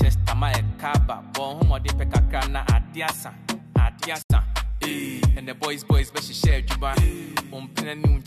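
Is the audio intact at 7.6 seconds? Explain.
Yes, the audio is intact at 7.6 seconds, with no dropout, glitch or other fault at that moment.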